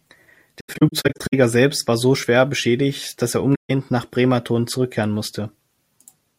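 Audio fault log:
0.60–1.34 s: AAC frame loss with muting. The speech drops out in scattered gaps across about 0.73 s, totalling 384 ms, and the longest gap is around a tenth of a second. The decoder zeroes the spectrum of each missing frame, and the overlapping windows fade the sound out and back in, so each hole is soft-edged.
3.54–3.70 s: AAC frame loss with muting. A further 149 ms goes silent. It fades down and back up at its edges rather than cutting off, because the lost frames' spectra are muted and the window overlap smooths both boundaries.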